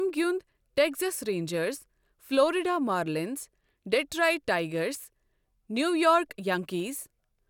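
No technical faults are audible anywhere in the recording.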